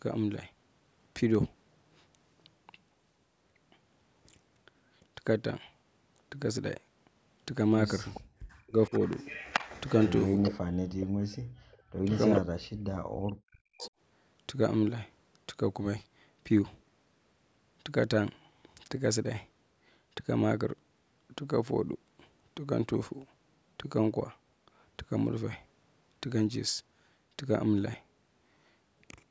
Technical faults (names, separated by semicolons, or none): echo leak; background gated by the echo canceller; speech suppressed in double talk